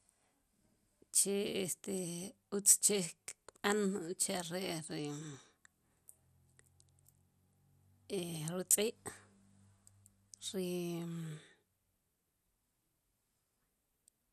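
Throughout the speech, the likely cause is MP2 compression starved of bits, consistent with a bitrate near 80 kbps. Upper sub-bands are switched off and the rest coarsely quantised, so nothing reaches above 15 kHz and a dull, gurgling granularity clings to every phrase.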